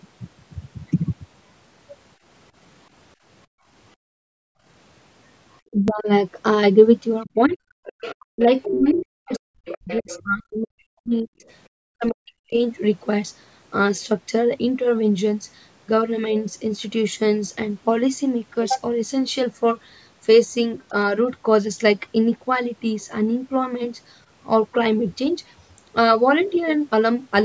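Speech recorded through call microphone processing, which takes out the lowest bass. The background is gated by the echo canceller from 3.47 to 4.65 s. The room sound falls by about 35 dB for roughly a second while the loudspeaker plays. It returns when the canceller releases. Speech is suppressed in double talk at 5.65 to 6.07 s, 7.24 to 12.57 s and 20.89 to 20.95 s. The voice dips, thins or breaks into pieces. The worst drop is around 40 dB in the long stretch, and the last dip is about 10 dB. The likely cause is the canceller mistaking the talker for loudspeaker echo and muting both. At 5.88 s a small jump suggests a dropped buffer (overrun). The hardware likely overwrote a short slice, around 15 ms, before it was read. The two sides then join with no gap. The other side's voice leaks through from 7.84 to 10.63 s, about 10 dB under the talker. Fainter scraps follow at 11.48 to 11.53 s, 12.06 to 12.52 s and 23.01 to 23.05 s. 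This is likely loudspeaker sound the canceller failed to remove.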